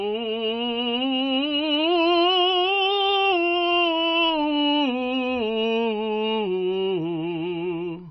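Likely MP3 compression at a very low bitrate, consistent with about 24 kbps, runs through the whole music clip: starved of bits, the encoder drops everything above 5.8 kHz and blinks weak frequency lines on and off, leaving dull, watery, swirling sound with smeared attacks.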